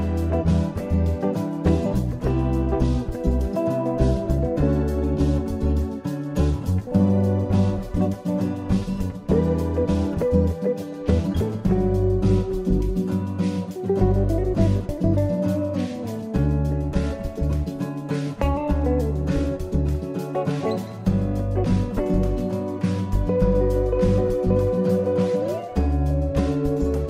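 No technical fault can be heard anywhere in this audio. There is nothing to place on the timeline and nothing to explain.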